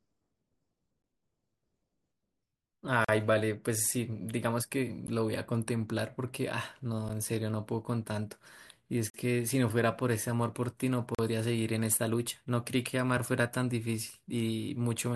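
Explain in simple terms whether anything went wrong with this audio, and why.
The stream is delivered in 2-second chunks whose timing doesn't quite line up, so the player fills each join with silence. This gap between stream segments cuts the speech with brief, sharp holes at 3.05–3.09, 5.07, 7.09, 9.10–9.14 and 11.15–11.19 seconds.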